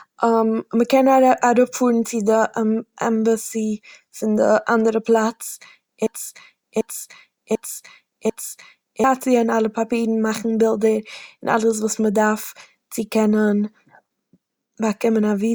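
From 6.07 s to 9.04 s the speech falls into a broken-record loop. A fragment about 0.74 s long repeats four times, back to back. The intervening audio is lost. A stalled player or stream likely caused it. Normal speech resumes at "און מאכן".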